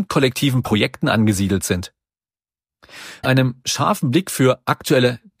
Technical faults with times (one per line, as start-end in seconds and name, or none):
0.64-0.67 damaged data in a compressed stream
3.20-3.26 damaged data in a compressed stream